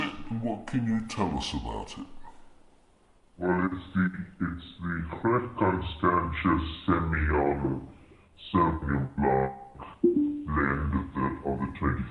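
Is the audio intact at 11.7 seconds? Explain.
No. At 11.7 s, as throughout, the audio has a wrong sample rate fault. It runs at 0.667 times normal speed and about 7 semitones lower, which fits 48 kHz material played at 32 kHz. Because speed and pitch drop together, this is not a pitch shift or time stretch.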